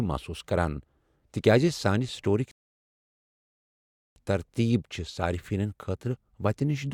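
A short speech recording with one rebuffering stall: at 2.51 s the audio drops to silence, then picks up again at 4.16 s exactly where it left off. Nothing's missing, but the player ran dry waiting for more data, adding about 1.65 s.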